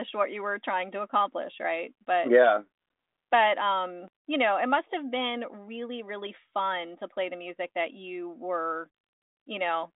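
No technical faults can be heard anywhere in the speech. The G.726 ADPCM path at 40 kbit/s holds the sound to a telephone band of roughly 250 Hz to 3.7 kHz, with nothing above 3.8 kHz and codec damage faint at most.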